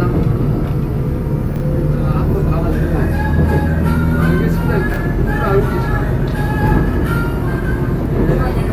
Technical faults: chunks out of order

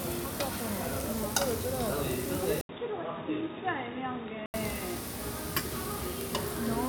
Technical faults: input switched to a poorer device

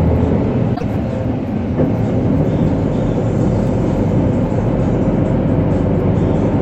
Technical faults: broken MP3 bit reservoir

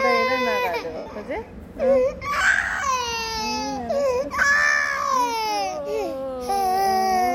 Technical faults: lost LE Audio frames

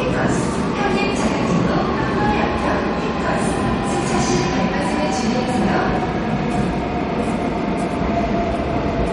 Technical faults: MP3 compression

